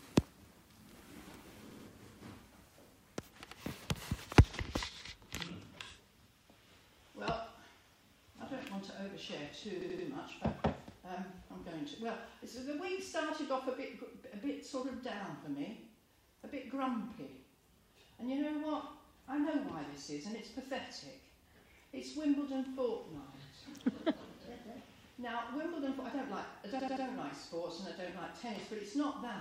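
At 1.71 s a short piece of sound plays three times in a row. This is a repeated buffer: new audio failed to arrive in time, so the last block was replayed. Each copy lasts about 85 ms, which fits a 4096-sample buffer. The stutter recurs at 3.50 s with one extra play, and at 9.81 s and 26.80 s with three extra plays each. On a waveform or spectrogram these show as identical side-by-side segments, with a hard vertical discontinuity at every join.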